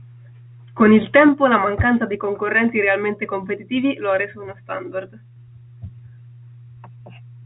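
No faults; the speech carries the narrow band of G.711 telephone coding, which fits A-law at 64 kbps, with nothing heard above about 3.8 kHz.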